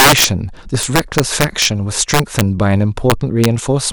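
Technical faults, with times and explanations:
0.00–0.24 s, 0.83–1.65 s, 2.14–2.41 s and 3.10–3.45 s, integer overflow: violent, snapping cracks burst out of the louder speech peaks, far harsher than ordinary clipping. The level was pushed past the integer ceiling by about 9 dB in the first stretch, about 5 dB in the next two, and about 1 dB in the last. Instead of being held at the limit, each overshooting peak wrapped around to the opposite extreme, so the waveform jumped across its full range.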